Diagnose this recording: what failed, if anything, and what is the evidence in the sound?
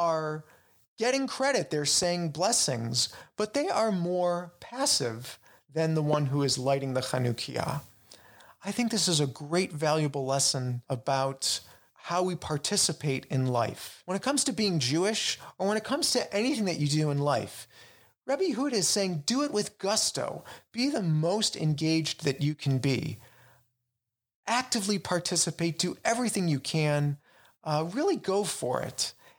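Two loud pops, single sharp transients over continuing speech: 2.03–2.05 s before "blessings but they are", and 6.13–6.16 s between "more passive than the" and "who is lighting the", around 10 and 15 dB above the speech. Likely analogue wiring: a voltage step from a connector or switch.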